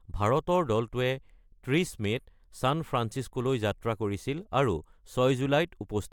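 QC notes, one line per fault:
No audible faults found.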